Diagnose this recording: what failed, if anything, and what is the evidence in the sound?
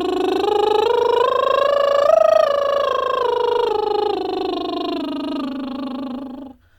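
Nothing in the chain failed that can be heard in this music recording. No stage, from capture through to playback, leaves a mark on the sound that points to a fault.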